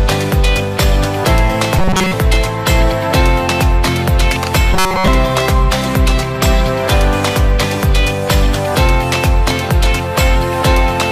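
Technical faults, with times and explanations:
1.79–2.13 s and 4.74–5.08 s: robotic sound from repeated short buffers. The sound becomes a rigid metallic buzz at 188 Hz, which fits a segment of about 5.3 ms being looped. The likely cause is audio arriving too seldom, so most of the real signal is skipped.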